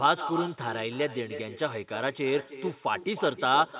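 From start to end the speech carries echo with no canceller: a thinner copy of every phrase trails it by roughly a third of a second, about 11 dB quieter. This is the call returning from a far-end loudspeaker. Unlike room reverberation, the repeat is a distinct delayed copy rather than a smooth decay.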